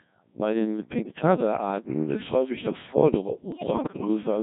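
Throughout, the speech carries the robotic, buzzy sheen of the Codec 2 vocoder, consistent with roughly 1.6 kbit/s. The voice is resynthesised from sine waves rather than waveform-coded, so it sounds uniformly artificial instead of smeared or warbly like lossy music codecs. From 1.01 to 1.22 s, and again from 3.52 to 4.07 s, bit errors on digital voice radio corrupt frame parameters at an error rate of several percent. Pitch, level and timbre jump erratically into bleeps and gibberish, unlike dropouts, which go silent.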